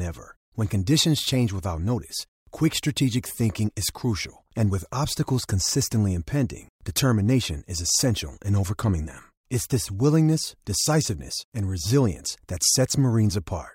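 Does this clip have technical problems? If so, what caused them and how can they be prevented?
No, nothing in this speech recording stands out as a technical fault, so there is no cause to trace and nothing to prevent.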